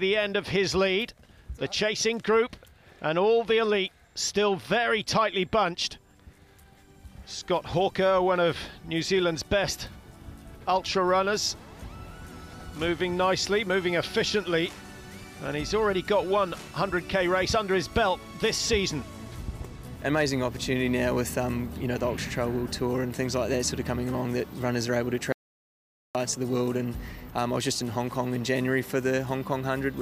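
At 25.32 s the sound cuts out mid-flow and comes back at 26.15 s, an audio dropout to silence of about 0.83 s. The gap is dead, with no room tone at all, likely because the input was lost, whether through a disconnected device, a failed link or a stray mute, while recording carried on writing silence.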